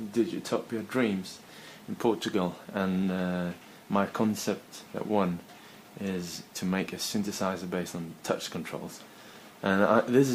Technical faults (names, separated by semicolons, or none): none